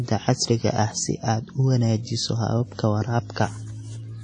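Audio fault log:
throughout, WMA compression: likely a low-bitrate transform encoder, consistent with about 32 kbps, coding in long blocks, so quantisation noise smears across tens of milliseconds and weak components vanish. The speech sounds ringing and washy, with hiss breathing alongside it, and nothing above 10.1 kHz.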